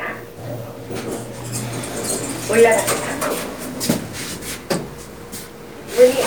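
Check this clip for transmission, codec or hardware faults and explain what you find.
No transmission, codec or hardware faults can be heard in this audio.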